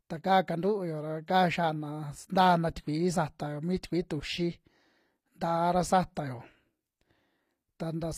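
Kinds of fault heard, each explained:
HE-AAC compression: throughout the speech the top of the spectrum sounds synthetic, with sibilants coming out gritty, metallic and lisping rather than crisp. This is likely HE-AAC v2, where only the lower band is truly coded and the treble is regenerated by copying lower bands upward under a coarse envelope, so upper harmonics fail to line up with those below. The damage is plainly audible, which fits a low bitrate of around 24 kbps.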